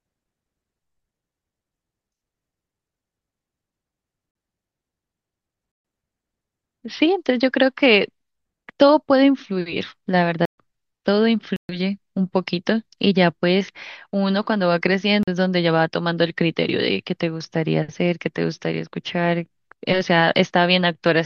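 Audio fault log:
4.31 s and 15.23 s: block of digital silence, 43 ms dropouts with abrupt edges, which fits a missed 2048-sample output buffer.
5.72–5.85 s, 10.45–10.58 s, 11.56–11.69 s: block of digital silence, 128 ms holes where the sound cuts out and back abruptly.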